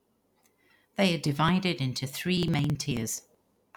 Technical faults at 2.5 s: periodic USB or driver dropouts

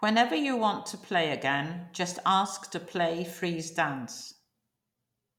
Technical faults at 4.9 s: none

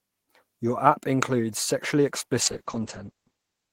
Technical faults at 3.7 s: call bitrate drop

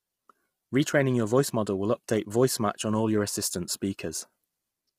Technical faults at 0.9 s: low-delay AAC compression

